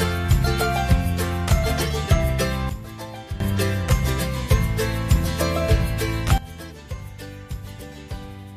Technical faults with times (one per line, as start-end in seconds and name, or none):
2.69-3.40 sudden gain jump
6.38-8.56 sudden gain jump